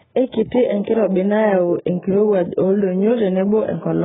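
Heavy AAC compression, likely AAC-LC, runs through the whole speech clip. The encoder had too few bits for its frames, which fits a bitrate around 8 kbps, so it cut the bandwidth hard and quantised what remained coarsely. Nothing is left above 3.8 kHz, making the speech dull and muffled, and the sparse spectrum leaves gaps, so sustained sounds warble and sibilants turn smeared and fizzy from start to end.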